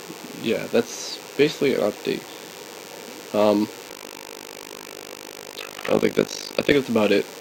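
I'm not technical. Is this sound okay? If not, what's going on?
No. A DECT cordless phone buzz runs through the whole clip. A nearby cordless phone sends radio bursts 100 times a second, heard as a thin, steady buzz.

From 3.9 to 6.74 s there is overlap-add ripple. Sound rebuilt from badly joined chunks pulses very deeply, about fifty times a second, giving a rough, robotic flutter.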